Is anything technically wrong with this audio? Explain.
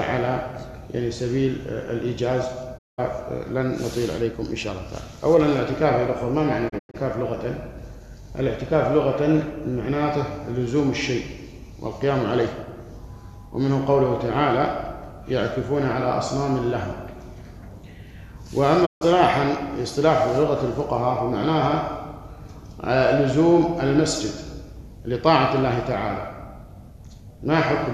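Yes, there are three digital broadcast dropouts, at 2.77–3.00 s, 6.68–6.96 s (broken into short holes, longest about 96 ms) and 18.85–19.03 s. The receiver lost good frames and muted, fading out over 20 ms, so the audio drops to silence and resumes with that material gone.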